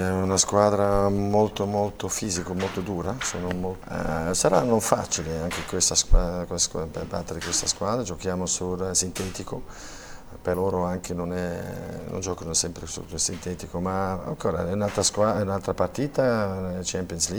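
From 0.84 to 3.30 s, GSM signalling bursts break in: a nearby 2G phone exchanging short radio bursts with the network, rectified by the audio circuit into galloping ticks and brief 217 Hz buzzes, around 20 dB below the signal. A spectrogram shows clustered vertical stripes with harmonic ladders; the waveform shows spiky packets.

At 3.48 s a continuous GSM phone buzz takes over until 4.30 s, as the phone holds a call and pulses 217 times a second. It is a harsh, raspy drone at about 28 dB below the signal, drawn as evenly spaced horizontal harmonics and a regular pulse ripple.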